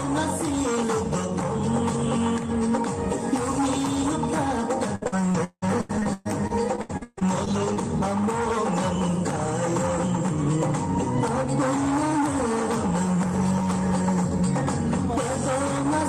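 From 4.95 to 7.78 s there is repeated packet loss (robotic sound). The stream keeps losing packets or receiving them late. Each time, the gap is patched by extending the last sound. About a third of the stretch is concealed this way. The longest single hole lasts 177 ms. Roughly 300 ms of audio is rebuilt. The holes arrive in quick succession, so the sound turns choppy and robotic, with pieces missing.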